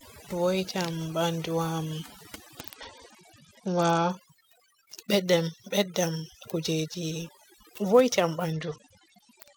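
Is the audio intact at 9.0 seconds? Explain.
No. From 8.53 s to the end at 9.56 s the treble goes dull and a gritty noise rides on the speech. This is a Bluetooth SBC bit pool drop. The link cut its bit allocation, which fits a fall from a bit pool of 28 to 9, near 78 kbps. The top sub-bands get almost nothing and the rest are quantised coarsely.

Over that, the background drops and breaks up into twinkling specks. That comes from overdone noise removal, which pulls individual frequency bands down whenever they approach the noise estimate and takes quiet parts of the voice with them.

A hiss and roughness also rises on louder, brighter moments. That is sample clock jitter of around 7 microseconds. The timing errors scale with waveform slope and leave an error roughly 25 dB below the signal.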